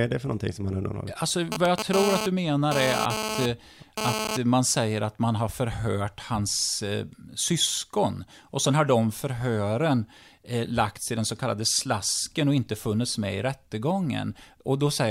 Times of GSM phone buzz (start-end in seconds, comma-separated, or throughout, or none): 1.52-4.37